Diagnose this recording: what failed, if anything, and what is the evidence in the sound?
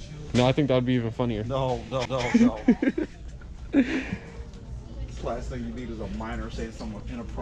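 CD skip at 2.05 s, in playback: a tick and a brief mute of a few milliseconds, then the sound resumes elsewhere after the laser jumped tracks on the disc's spiral.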